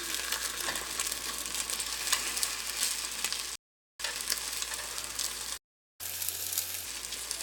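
A rebuffering stall runs from 3.55 to 4.00 s. The sound drops to silence, then picks up again at exactly the point where it broke off, so nothing is skipped. The player ran short of downloaded audio and waited for more to arrive. The gap holds the clip still for about 0.44 s and pushes everything after it later by that amount.

A playback stall follows from 5.57 to 6.01 s, with the sound cutting out mid-flow for about 0.42 s before it carries on. The output went quiet because the player had nothing ready to send. Most likely its data ran dry again, or its processing thread was held up, and it could not produce audio until it recovered.

Catch-up at higher speed comes straight after, from 6.01 to 6.85 s. The sound runs at 1.5 times normal speed and its pitch rises by roughly seven semitones. The player is resampling its backlog to win back the time lost in the stall, so speed and pitch rise together. 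At 6.85 s both drop back to normal.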